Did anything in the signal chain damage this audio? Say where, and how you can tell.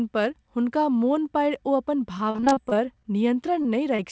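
Yes, at the network stage of the call. From 2.18 to 3.06 s the speech turns choppy and robotic: repeated packet loss. About 180 ms of audio never arrived, spread across roughly a dozen separate holes, the longest 37 ms. The jitter buffer patched each one by extending the preceding sound, so about a quarter of that stretch is synthesized continuation. Because the patches come back-to-back, the speech comes out choppy with pieces missing.

Two isolated short concealed packet losses follow, at 3.62 to 3.66 s and 3.96 to 4.00 s, each about 20 ms of lost audio. Here the receiver bridged a single gap by carrying the previous sound forward, either from its pitch or as shaped noise, then crossfaded back into the real signal. On playback each one shows up as a brief smear or wobble rather than a run of choppiness. The band-limited sound, with nothing above 8 kHz, comes from the call codec, which sounds like G.722 at 64 kbps, and is not part of the damage.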